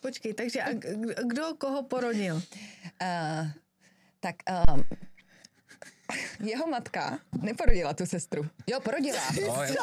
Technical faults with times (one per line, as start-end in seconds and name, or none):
4.65-5.00 phantom power thump
7.69-7.74 phantom power thump